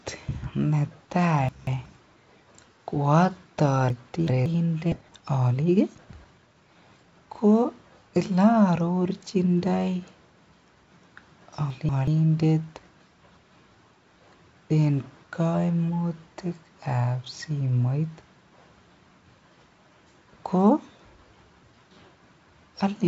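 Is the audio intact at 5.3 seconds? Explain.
No. At 5.3 seconds the audio falls inside a jitter buffer speed-up from 5.02 to 7.13 s. The receiver's buffer had overfilled, so it repeatedly cut short pitch-period pieces, about half a second in total. The speech runs hurried at 127% speed, with unchanged pitch.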